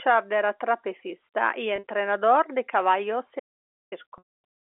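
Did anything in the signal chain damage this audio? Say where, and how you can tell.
Yes. Network stage: packet loss with pitch repetition at 1.76 s, after "era trapecista y", briefly held and buzzy, and at 4.18 s, where 150 ms fades toward silence. Each gap was bridged by repeating the last pitch period.

Capture stage: audio dropout to silence from 3.40 to 3.92 s, after "de caballos", leaving silence with no room tone. The likely cause is a lost input while the recorder kept writing silence.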